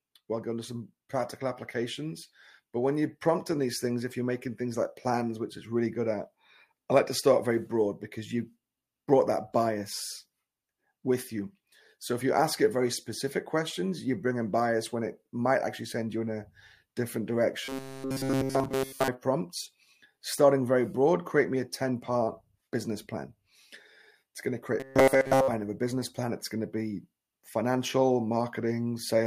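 From 17.64 to 19.08 s, and again from 24.80 to 25.48 s, the sound becomes a rigid metallic buzz at 134 Hz. This is robotic sound from repeated short buffers. The likely cause is 7.5 ms fragments repeated throughout, replacing the real audio.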